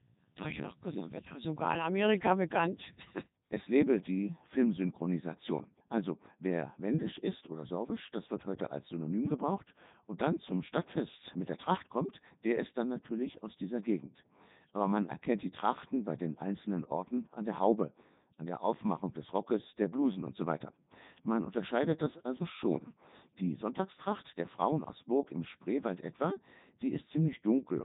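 The whole recording has passed through a Codec 2 vocoder, heavily degraded, which fits its top 3.2 kbit/s mode. Only pitch, voicing, energy and a coarse spectral envelope survive, and the decoder rebuilds the speech from sine waves, leaving it robotic and buzzy, with nothing above 3.8 kHz.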